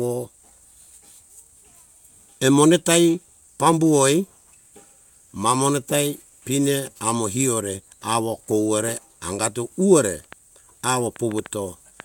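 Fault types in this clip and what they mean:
Train of clicks: A run of sharp, similar-sounding ticks starts just after "awo kowore angato uwore" at 10.33 s and continues to 12.01 s, about seven clicks at roughly 3.6 per second with an uneven spacing. They stand out at about 5 dB above the speech and are heard in pauses too. The likely cause is a repeated impulse from outside the signal, such as electrical interference or a faulty connection or power supply.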